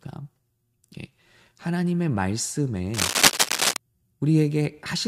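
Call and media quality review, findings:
Cable scratch noise, 2.94–3.77 s: dense, uneven scratching and rustling over the speech, louder than the voice itself. Likely a worn cable, connector or control being moved, rapid contact-resistance changes injecting irregular noise bursts into the signal path.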